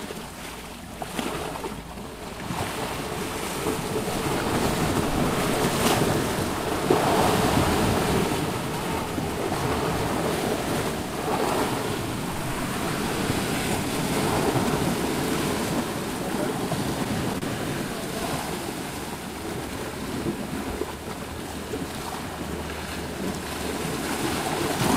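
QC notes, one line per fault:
17.38–17.44 s, short stall from a late packet: the sound is held about 33 ms while the receiver waits, then resumes where it stopped, so nothing is lost, unlike a dropout.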